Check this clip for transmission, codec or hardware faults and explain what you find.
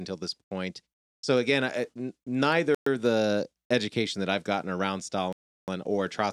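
The speech has three gaps of clean silence that fit a Bluetooth stall: 0.44 to 0.51 s (69 ms), 2.75 to 2.86 s (118 ms) and 5.33 to 5.68 s (353 ms). Interference likely held up packets and the headphones' buffer ran dry. Unlike a dropout with concealment, there is no smeared or repeated sound, just silence before the speech resumes.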